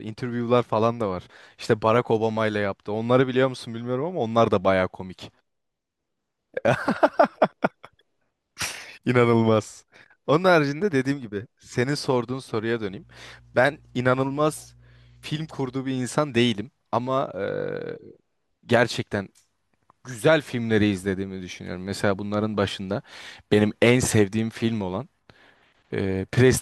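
Speech, with mains hum entering from 12.85 s to 15.73 s: a steady 60 Hz tone with low harmonics sits roughly 30 dB below the speech. Power-line energy coupled into the signal, through a ground loop or nearby transformer, produces this during that stretch.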